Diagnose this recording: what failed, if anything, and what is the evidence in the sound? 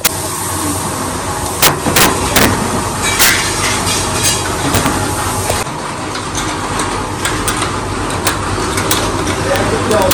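Integer overflow in a fixed-point gain or sample-format conversion stage. Throughout the clip, loud peaks trigger violent cracks far sharper than clipping. The signal is driven about 10 dB too hot, so roughly half a percent of samples exceed full scale and wrap to the opposite sign instead of limiting.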